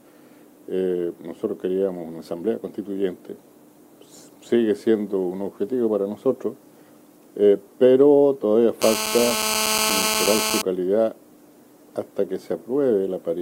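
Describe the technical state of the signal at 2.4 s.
At 2.4 s the signal is intact, with no audible fault at that point.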